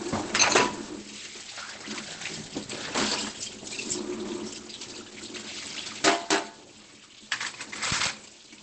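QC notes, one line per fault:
Throughout, Opus compression: the sound is muffled and hoarse, with nothing above about 8.7 kHz. This likely comes from Opus dropping into its SILK speech mode at a wideband setting, which fits a starved rate near 16 kbps that coarsens detail and trims the top.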